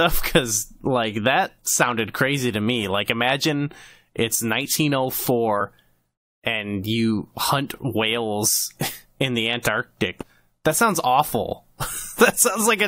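At 5.60 s and again at 10.21 s the speech is broken by a brief glitch, the sign of damaged data in a compressed stream. Corrupted bytes in the encoded file leave the decoder misreading a frame and losing sync until it finds the next valid frame header, and each glitch lasts under 20 ms.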